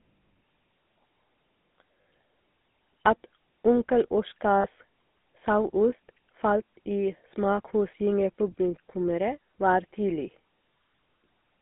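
Throughout, the speech passes through a GSM full-rate codec at what sounds like 13 kbps, with regular-pulse excitation giving a buzzy, gravelly roughness inside a 200 Hz to 3.6 kHz band. Lost GSM frames at 2.02 to 2.05 s and 4.60 to 4.67 s, each about 40 ms, are bridged by repeating the previous frame, leaving brief metallic rings.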